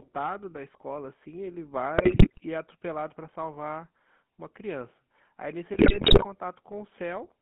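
Throughout, the speech passes through the GSM full-rate codec, whose pulse-driven vocal-tract model leaves a buzzy, gravelly roughness within a band of roughly 150 Hz to 3.5 kHz. From 1.98 to 2.40 s and again from 5.74 to 6.25 s, GSM bit errors corrupt the decoder's filter, pitch and gain values, breaking the speech into squawks, pops and gargling.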